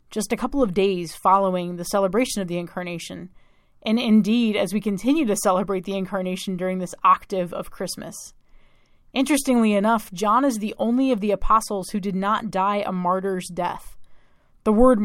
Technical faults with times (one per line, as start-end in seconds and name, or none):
none